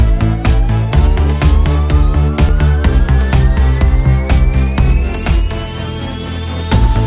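No dropouts, clicks, distortion or level jumps turn up anywhere in the audio, so there is nothing to flag.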